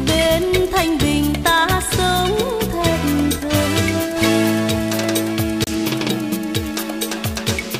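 At 5.64 s the audio drops out briefly: the event spans about 52 ms up to 5.69 s, with roughly 29 ms of outright silence inside it, after which the sound resumes. The gap is heard as a short, clean cut to silence. The likely cause is a Bluetooth stall, where radio interference delayed packets long enough for the receiving buffer to empty, halting playback until retransmitted data arrived.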